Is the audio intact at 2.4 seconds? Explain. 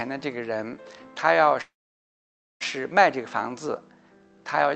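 No. At 2.4 s the sound has stopped: from 1.61 s the last sound carries on as a brief buzz that fades almost at once into silence lasting about 0.9 s, and normal audio returns at 2.63 s. This is a call audio freeze, likely caused by packets held up in transit so the jitter buffer ran empty. Nothing is lost; the audio resumes where it stopped, now running about a second late.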